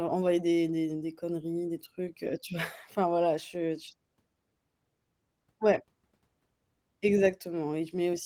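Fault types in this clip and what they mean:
Nothing to flag here: listening to this bit of speech, no technical fault turns up at any point.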